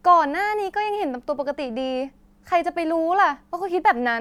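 No technical faults can be heard in the speech.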